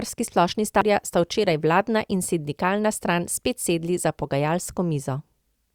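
At 0.81 s there is a CD skip. A jolt or a disc flaw has knocked the laser off its track onto a different turn of the spiral, so the player briefly mutes, for only a few milliseconds here, and then resumes reading from the wrong place. The result is a small tick followed by an abrupt discontinuity in the speech, with playback picking up mid-flow just before "sta včeraj vladna in".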